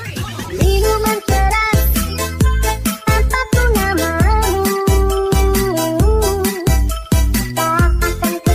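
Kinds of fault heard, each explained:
Nothing here stands out as a fault; it's just the audio as it was captured, with no glitches worth pointing to.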